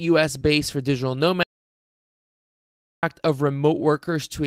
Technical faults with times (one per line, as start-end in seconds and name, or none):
0.39-0.49 short concealed packet loss
0.43-0.45 lost packet rebuilt from error correction
1.43-3.03 audio dropout to silence